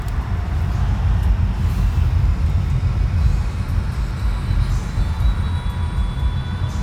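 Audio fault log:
No faults heard anywhere in this sound recording.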